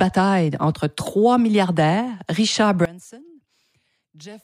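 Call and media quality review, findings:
One channel inverted, 2.85 s to end of clip at 4.44 s. Speech drops about 22 dB to a faint residue. Likely cause: polarity flip on one stereo leg, so centred speech cancels on mono summing, leaving only interchannel difference.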